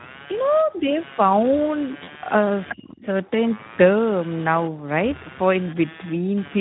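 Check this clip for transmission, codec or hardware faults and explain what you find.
The clip has five faults: two running throughout and three brief ones clustered between 2.0 and 3.1 s. The lowest bass is filtered out, which is ordinary call microphone processing and not a fault.

Computer activity noise runs through the whole clip as a buzzy pulse train near 150 Hz, about 20 dB below the speech. Processor or peripheral load is disturbing the audio circuit's ground. It rises and falls with that load rather than with the speech, which separates it from codec damage.

The Speex codec damage is also continuous and plainly audible: the speech sounds hoarse and noisy. The degradation points to a low quality setting around 11 kbps, where the CELP excitation gets too few bits. Unlike the ground buzz, these artefacts exist only inside the speech itself.

VoIP packet loss concealed by the speech codec occurs from 2.03 to 2.10 s. 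A gap of about 40 ms, which fits two lost 20 ms frames, was filled by the decoder repeating its last pitch and filter. The result is a fading buzzy tone or coloured noise, and the speech stays weak or distorted just afterwards. That smeared sound sets it apart from a genuine dropout.

The other side's voice leaking through appears twice. At 2.69 s a scrap of a second voice sits roughly 10 dB under the speech. At 3.01 s a fainter scrap sits about 25 dB down. These are brief fragments of a different voice rather than tonal smearing, consistent with loudspeaker echo the canceller missed.

Speech suppressed in double talk follows from 2.73 to 3.08 s. The main voice dips by as much as 30 dB while the far side is playing on the loudspeaker. The likely cause is the echo canceller clamping down because both sides were talking. It differs from packet loss in being a level drop with no synthetic tone filling it.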